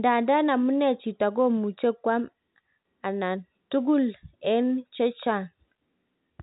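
No technical faults can be heard in this speech. The G.711 telephone coding shows only in its narrow band, with nothing above 3.8 kHz, and any coding damage is faint at most.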